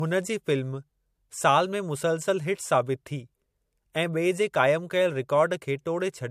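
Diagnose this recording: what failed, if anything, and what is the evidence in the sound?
The failure is at the codec stage, and it runs the whole length of the speech: there is no content above 15.2 kHz, with a hard shelf at that frequency on a spectrogram rather than a gradual roll-off. That cut-off points to a low-bitrate MP3 pass, likely followed by re-encoding as a high-bitrate MP3. This is low-bitrate audio saved at a high bitrate: the second encode kept the earlier losses and added nothing back.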